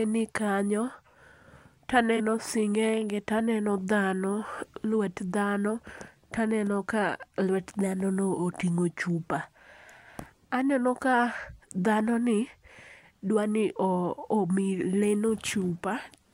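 At 2.17 to 2.21 s, just before "sing'enge taneno", there is a corrupt frame concealed. The concealed stretch is about 40 ms long. Corrupted bits in the compressed stream were detected by the AAC decoder, which replaced the damaged section with its own concealment instead of decoding garbage. The gap's length fits a few lost frames.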